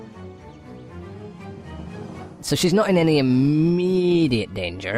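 From 2.40 s to the end, the audio has a wrong sample rate fault: it plays back about 1.09 times too fast, and its pitch rises by about 1.5 semitones at the same moment. Because speed and pitch shift together by the same ratio, the samples are being clocked out faster than they were captured, with no rate conversion in between. The ratio fits 44.1 kHz material played at 48 kHz.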